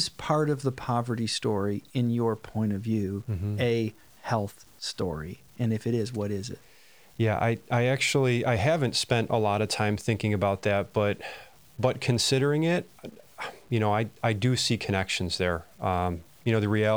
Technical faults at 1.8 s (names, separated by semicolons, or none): low bit depth without dither